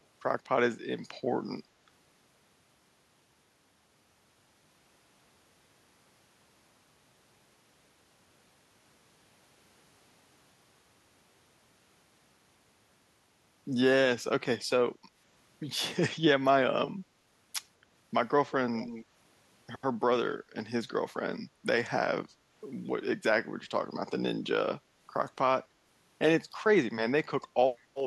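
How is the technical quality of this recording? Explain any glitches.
One fault stands out: an echo leak from 18.75 to 19.05 s. A faint copy of the speech returns 187 ms late, well below the main level. The likely cause is a far-end loudspeaker whose echo canceller let its microphone pickup through. It is a distinct delayed repeat, not the smeared tail of room reverb.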